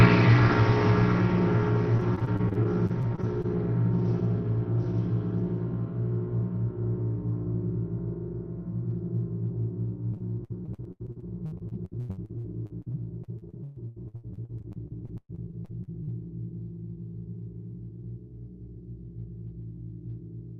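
Everyday sounds, carried over a call path whose top end stops near 6 kHz, which fits Opus at a low bitrate around 20 kbps. Repeated packet loss (robotic sound) hits twice. From 1.97 to 3.46 s, short holes break the sound, the longest 28 ms. From 10.14 to 16.09 s it is worse. About a third of that stretch is patched, with gaps up to 125 ms, and about 20 ms of it only roughly rebuilt. Each hole is filled by stretching the previous sound, giving a choppy texture.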